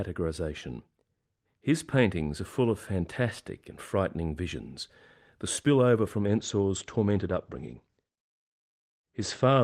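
At 6.27 s, right after "visions the spillover from", a call bitrate drop sets in and lasts to the end. The top end is cut from 20 kHz to 8 kHz and the speech turns watery and coarse, which fits about 40 falling to 15 kbps. Unlike packet loss, there are no gaps.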